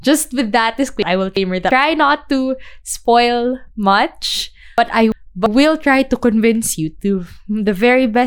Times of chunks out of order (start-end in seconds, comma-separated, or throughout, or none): 1.02-1.71, 4.78-5.46